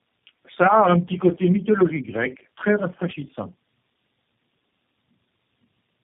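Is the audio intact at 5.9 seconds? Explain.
No. At 5.9 s, as throughout, the speech shows tandem speech coding. It sounds like three low-rate speech codecs in a row, which fits AMR-NB, then AMR-NB again, then G.729A. Each re-encodes the last one's damage, so the speech is rougher and more warbly than a single codec would make it. Nothing remains above 3.7 kHz.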